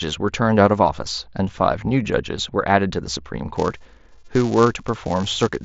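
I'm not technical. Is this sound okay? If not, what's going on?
No. From 3.56 s to the end, there's a filter restarted on every block: it forgets its state every 128 samples, adding a buzz, about 345 ticks per second, under the speech.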